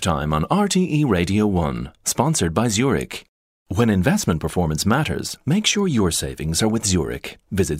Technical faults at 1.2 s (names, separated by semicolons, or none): word clock ticks